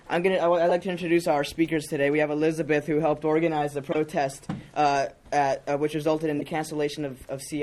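Corrupt frame decoded at 0.69–0.71 s, 3.92–3.96 s and 6.39–6.42 s. Damaged compressed frames play as brief chirps, squeaks or blips of misplaced energy peaking around -15 dBFS.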